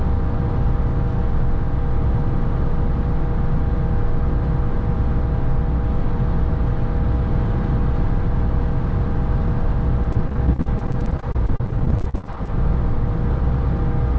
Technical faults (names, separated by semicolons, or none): repeated packet loss (robotic sound)